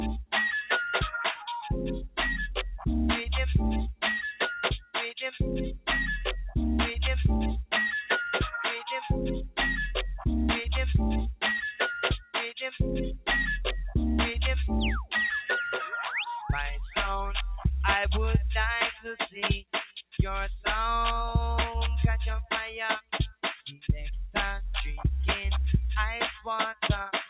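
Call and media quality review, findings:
Sound cut by the noise suppressor, 19.62 to 20.14 s: level dips by up to about 20 dB for around a third of a second in total. Suppressor misread sustained or decaying content as noise and attenuated it. Onsets largely intact. Band audibly ends at 4 kHz, consistent with a G.711 A-law call path at 64 kbps.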